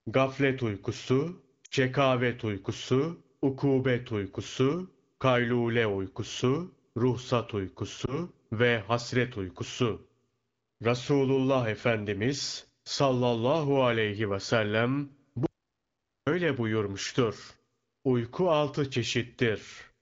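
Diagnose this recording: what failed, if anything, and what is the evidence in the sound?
Lost AMR speech frames, at the network and codec stage: at 1.65–1.74 s a 60 ms stretch and at 8.05 s a single 20 ms gap smear and fade rather than cutting cleanly. The AMR-WB decoder is concealing dropped frames by extending the last pitch with falling gain.

Audio dropout to silence, at the input or buffer stage: from 15.46 to 16.27 s the sound stops dead into silence for about 0.8 s, with no room tone. Unlike concealment, nothing is smeared. A lost input or link is the likely cause.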